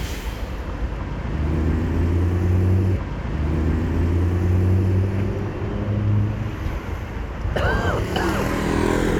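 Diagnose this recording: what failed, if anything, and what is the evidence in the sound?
At 2.95 s the audio jumps back with a small blip, and the preceding two seconds of sound play again, running to 4.95 s. This is a stream segment repeated at the playback stage: the player queued the same 2-second segment twice.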